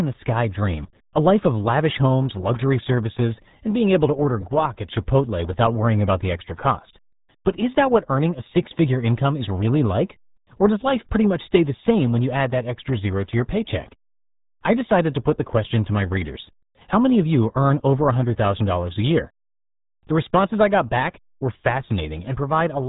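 From start to finish the speech has been squeezed through the RealAudio 14.4 codec, and it shows: nothing survives above about 3.8 kHz, so it's muffled, and heavy coding damage leaves a gargly, underwater texture that fits a starved 8 kbit/s dial-up stream.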